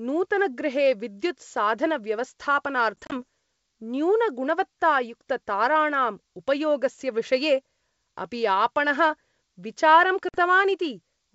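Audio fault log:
3.02–3.13 s and 10.29–10.38 s, packet loss on an ADPCM call: the first region drops about 60 ms in several hard-edged gaps of up to 30 ms each, and the second drops about 50 ms. The gaps are filled with plain silence, and the sound resumes slightly distorted. That happens because the decoder's predictor and step size have drifted from the sender's, and it settles within tens of milliseconds. Concealed loss would smooth over the gaps instead. The wideband G.722 sound stays clear to about 7 kHz around them.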